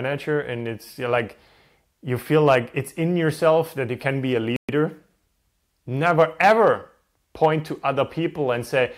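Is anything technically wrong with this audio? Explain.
Yes. At 4.56 s the speech drops out for 124 ms in a playback stall, likely a starved buffer or blocked player thread, leaving a flat waveform and blank spectrogram gap until 4.69 s.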